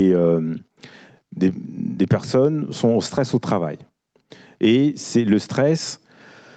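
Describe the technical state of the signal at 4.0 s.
At 4.0 s the speech shows gain pumping, which runs through the whole clip. The level swings by about 10 dB, likely because the input gain was set far too high and a fast limiter clamps it on each loud syllable. The level moves smoothly rather than splattering or cracking as clipping would. The 8 kHz top from the call path is present too.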